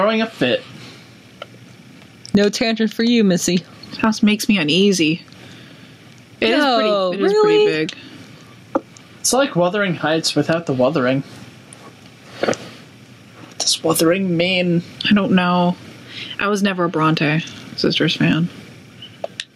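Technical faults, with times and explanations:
Throughout, gain pumping: the gain swings by roughly 25 dB, so loud and soft passages sit oddly close in level and the whole sound feels squashed. The likely cause is input gain set far too high, with a fast limiter or compressor clamping down on each peak. On a waveform the envelope looks flattened, with the noise floor bulging between peaks; a spectrogram shows the broadband background brightening in pauses and darkening under loud events.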